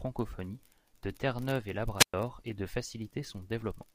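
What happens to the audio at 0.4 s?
Nothing goes wrong at 0.4 s; the speech there plays through intact, with no dropout, click, distortion or other fault at that moment.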